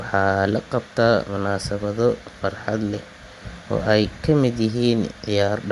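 Running the speech through a low-bitrate transform codec, most likely Bluetooth LC3 compression, leaves plainly audible codec damage throughout: nothing remains above 11.6 kHz, and the upper band turns breathy and grainy where noise stands in for detail, which fits roughly 48 kbps with 10 ms frames.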